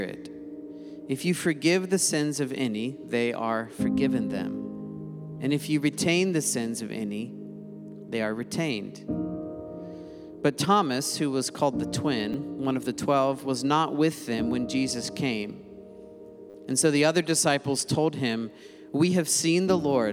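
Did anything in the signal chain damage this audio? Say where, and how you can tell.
Yes, a repeated buffer at the driver or buffer stage: a click at 12.33 s, a buzz at 16.50–16.54 s. It fits a 10 ms buffer replayed, and the hard joins repeat audio rather than dropping to silence.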